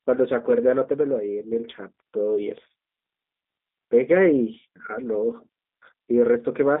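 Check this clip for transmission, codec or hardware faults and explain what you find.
The speech has been carried over a G.729 codec for its whole length. The audio sits in a narrow telephone band of about 250 Hz to 3.7 kHz, with nothing above it. The codec discards the waveform and resynthesises each 10 ms frame from a vocal-tract filter, a pitch predictor and a sparse pulse excitation. That model-based rebuild gives the plainly audible roughness and synthetic, buzzy texture, which fits the G.729A variant at 8 kbit/s.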